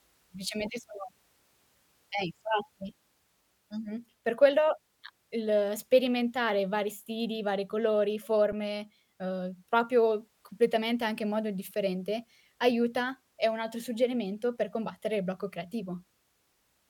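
Speech recording with one underrun with held sample at 8.52 s, right after "vari stili vari colori": a 5.8 ms flat freeze ending softly, as the output buffer emptied and playback resumed where it stopped, a gap of 256 samples.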